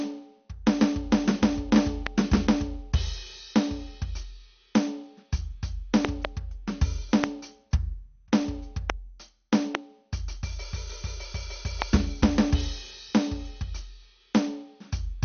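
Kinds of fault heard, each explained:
MP2 compression: The music sounds dull and gurgly all the way through, with a granular edge and nothing above 6.5 kHz. That fits a low-rate MPEG Layer II encode, likely around 48 kbps, where the upper sub-bands get too few bits and simply switch off.
loud pop: Sharp pops about 20 dB above the music land at 2.07, 7.24, 8.90, 9.75 and 11.82 s, plus a double pop spanning 6.05 to 6.27 s, with the music carrying on underneath. A sudden voltage step, likely from a plug, switch or static discharge, would produce them.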